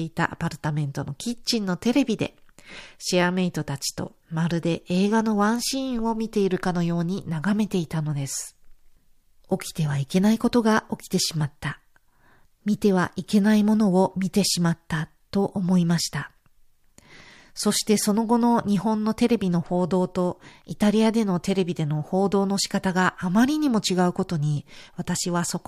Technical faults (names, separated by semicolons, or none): none